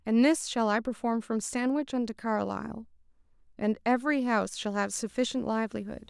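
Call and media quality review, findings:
Video or display buzz, 4.83 s to end of clip: faint buzz around 40 dB below the speech, at the 59.94 Hz field rate with hash above it. Probable component: display or video cable coupling into the audio path, injecting the picture's field-rate interference.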